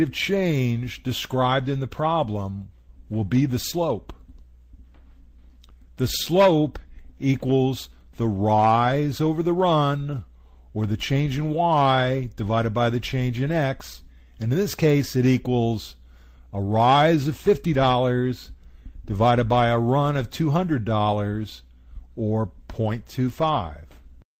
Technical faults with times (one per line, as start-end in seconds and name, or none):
none